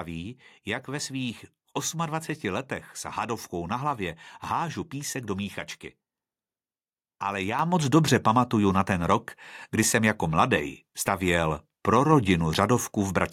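Microphone volume stepped up at 7.59 s, just before "moc dobře pamatuju na", by about 7 dB, and again at 12.12 s, after "jako mladej stavěl pro", by about 2 dB. Each time the call software raised the input volume in one step, so the speech and background jump louder together.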